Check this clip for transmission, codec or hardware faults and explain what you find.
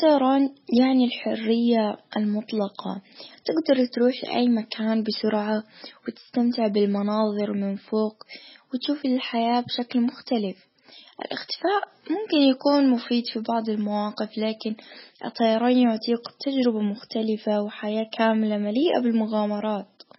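The clip shows heavy codec damage throughout, most likely from MP3 compression at a very low bitrate, around 16 kbps. Starved of bits, the encoder cuts everything above 5.6 kHz and drops weak frequency lines that flicker between frames, leaving the speech dull, watery and swirly, with smeared consonant onsets.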